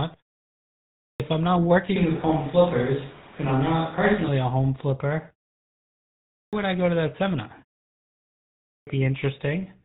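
Throughout, the speech carries the buzzy, gravelly roughness and dull top end of the GSM full-rate codec. Its pulse-driven vocal-tract model at 13 kbps discards everything above 4 kHz.

From 0.70 to 1.20 s, a clipped start after a pause swallows about half a second before "I'm not". The output device is waking after 0.56 s of silence. The onset is hard and missing.

From 1.96 to 4.28 s, between "I'm not" and "a home flipper", the sound becomes roomy and thin, likely from a switch to a distant microphone. The level barely changes, so it is heard as a change in tone rather than a drop in volume. Faint room noise sits well below the voice.

The same clipped start recurs from 6.01 to 6.53 s, cutting about 0.52 s before "I go to that", and from 8.37 to 8.87 s, cutting about 0.50 s.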